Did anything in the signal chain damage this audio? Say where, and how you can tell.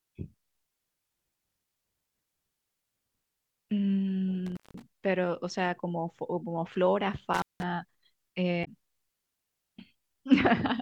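Yes, in two places. The first is in the analogue wiring: an intermittent contact, a loose plug or cable breaking the circuit for a moment. The speech drops out twice, from 4.46 to 4.82 s and again from 7.33 to 7.63 s, with the line open for roughly 176 ms and 180 ms. You get a crackle at each edge as the contact scrapes open and shut, and only a faint hiss fills the gap, because the signal path is broken rather than muted.

The second happens later, at the codec or storage stage: damaged data in a compressed stream. Between 8.64 and 8.68 s there's a short glitch that isn't part of the speech. Some of the compressed bytes there were corrupted, so the decoder misread those frames, lost sync and had to hunt for the next valid frame header. That brief glitch is the sound of the decoder working through bad data until it locks back on.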